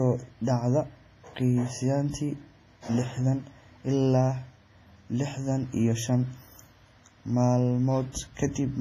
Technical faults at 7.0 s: WMA compression

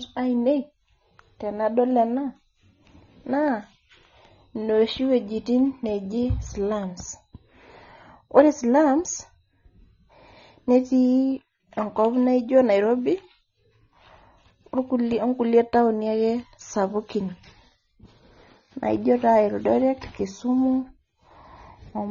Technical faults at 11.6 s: AAC compression

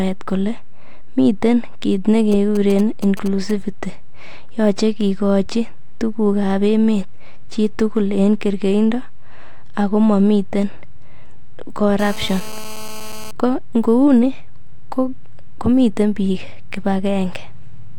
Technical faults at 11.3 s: none

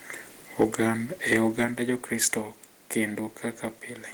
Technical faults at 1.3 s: microphone overload

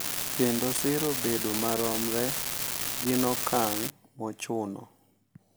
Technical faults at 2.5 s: unreliable data bit

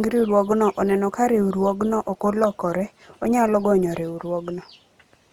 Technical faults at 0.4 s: Opus compression

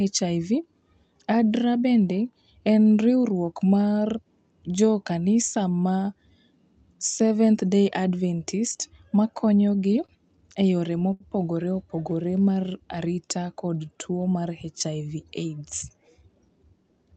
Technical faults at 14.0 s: jitter buffer slow-down

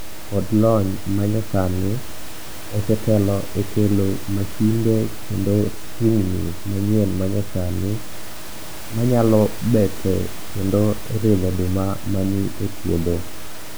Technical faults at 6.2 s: none

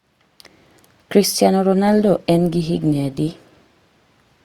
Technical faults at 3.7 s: adaptive stream at a lower bitrate

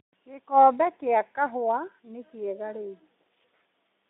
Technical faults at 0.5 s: none

